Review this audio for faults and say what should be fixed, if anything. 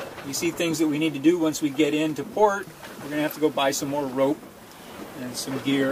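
Nothing here needs fixing, since nothing in the audio stands out as a technical problem worth chasing.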